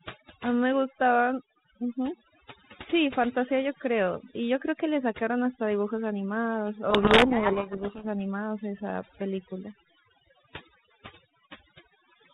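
From the first second to the end there's overdone noise removal on the speech. The reduction was pushed too hard, so any frequency band that sits near its idea of the noise gets pulled way down or shut off, and the softer parts of the voice get caught too. You hear it as a lowered background that breaks up into little twinkling specks.

Then from about 6.9 to 8.05 s there's a codec payload misread. The link is G.726, and outside this stretch it sounds like the 32 kbit/s rate a DECT cordless phone uses, with only light coding damage and nothing above 4 kHz. Here the two ends disagree on the bit order inside each G.726 code word. The decoder keeps getting frames that look fine, but the difference values come out wrong, so the speech is buried under harsh, grinding distortion until the bits line up again at about 8.05 s.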